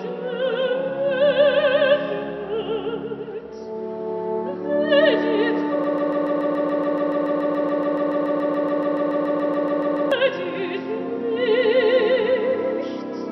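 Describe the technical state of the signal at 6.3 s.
At 6.3 s the signal is inside a broken-record loop running from 5.84 to 10.1 s. The player, encoder or stream has likely stalled and keeps resending the last fragment it held. The result is a 0.14 s slice of audio repeating exactly, back to back, about 30 times, producing a rapid mechanical stutter at roughly seven repeats per second. Whatever sound belonged to those four-plus seconds is lost rather than delayed.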